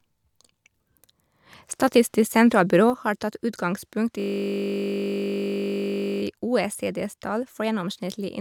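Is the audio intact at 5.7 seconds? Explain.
No. At 5.7 s a system hang loop is running, from 4.20 to 6.22 s. One 20 ms stretch of audio repeats exactly, giving a steady 50 Hz buzz. That points to a stalled computer while the hardware kept cycling its buffer. A sudden gain jump also applies here, from 2.9 s to the end. Sound and background both drop about 6 dB at once, likely from a gain change applied without a ramp.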